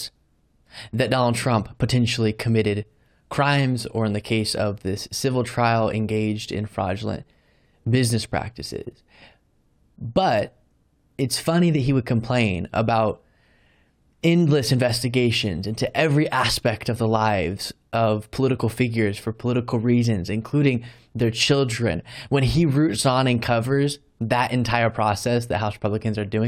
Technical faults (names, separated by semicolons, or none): none